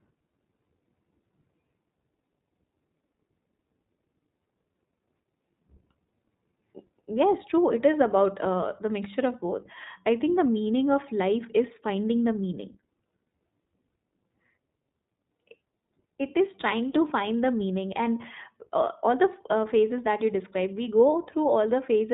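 Speech run through the iLBC codec throughout: on a spectrogram nothing appears above 4 kHz, and the roughness fits independently coded 20 ms frames, plainly audible.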